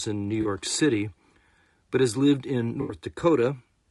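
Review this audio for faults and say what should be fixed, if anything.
Throughout the speech there is plainly audible low-delay AAC compression damage: the voice sounds rough and grainy, with noise filling the gaps between pitch harmonics and a thin, synthetic-sounding top band. This is likely AAC-ELD running at a low rate, consistent with about 32 kbps. Its short frames cannot separate the harmonics cleanly and leave too few bits for fine detail. Prevent it by raising the bitrate or using a longer-frame codec mode where latency allows.

AAC frame loss with concealment occurs twice. At 0.41 to 0.47 s a brief smeared, noisy patch replaces the signal, consistent with about 40 ms of missing audio. At 2.81 to 2.95 s, right after "but has lived in", a longer phasey, smeared stretch appears, consistent with about 80 ms lost. In both, the decoder rebuilds the gap from the last good spectrum instead of real data. 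Prevent it with forward error correction or a larger jitter buffer on the transport path.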